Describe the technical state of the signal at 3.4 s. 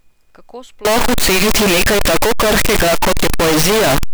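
At 3.4 s the speech is inside a float-read-as-integer fault running from 0.85 s to the end of the clip, likely 32-bit float samples being read as 32-bit integers. The sign and exponent bits then dominate each value, so the waveform is pushed into a near-square shape at an almost fixed, high level. The result is very loud and harsh, with background noise as loud as the speech, though the pitch can still be followed.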